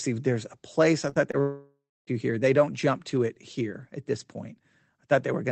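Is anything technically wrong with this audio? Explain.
Yes. The speech has two kinds of transmission fault, both heard through a call path whose upper band stops at about 8 kHz, consistent with Opus coding.

Short concealed packet loss occurs from 1.09 to 1.17 s and again from 1.31 to 1.35 s. The first event is two back-to-back gaps totalling about 40 ms, and the second is a single gap of about 20 ms. Each missing piece is 20 ms long, which fits lost 20 ms codec frames. The decoder extended the preceding sound across each hole and then crossfaded back, so these moments come across as a brief smear or wobble rather than a clean cut.

A long network dropout, likely from a stall in packet delivery, runs from 1.41 to 2.09 s, removing about 0.66 s of audio. At its start the receiver stretched the last sound into a buzzy continuation that decays. The final 250 ms of the stretch is near silence. 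The speech then resumes at 2.09 s, and the material from the gap is simply absent.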